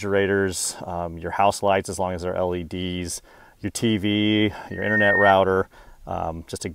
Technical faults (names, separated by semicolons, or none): loudspeaker feedback squeal